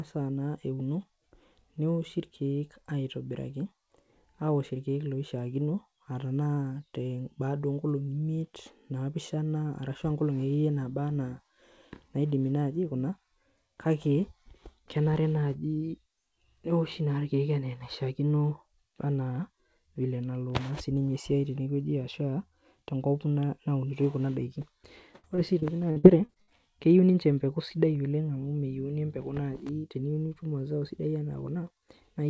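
From 25.16 to 26.57 s the speech breaks up with repeated packet loss, giving a choppy, robotic sound. Eight short holes open within that stretch, the longest 76 ms, and each is patched by stretching the preceding sound, so about a quarter of the span is synthetic fill. On a spectrogram this shows as smeared, repeated harmonic bands and abrupt seams. The waveform shows clipped-off, repeating segments. Throughout, nothing appears above 8 kHz, which fits a wideband call codec.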